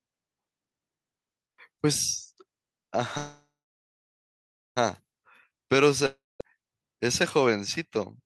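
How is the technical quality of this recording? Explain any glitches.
The speech has two glitches, both gaps where the audio stalls and is filled in, one delaying the rest of the recording and one losing material.

A call audio freeze runs from 3.17 to 4.78 s. Packets were likely held up in transit, draining the jitter buffer, so the receiver stretched the last sound into a fading buzz, then about 1.25 s of silence. Speech resumes exactly where it stopped, about 1.6 s late, with nothing lost.

A long network dropout follows from 6.06 to 6.42 s. No audio arrived, likely from lost packets, so the last sound was extended into a decaying hiss, then 0.2 s of silence. Speech returns further on, skipping about 0.34 s that is gone for good.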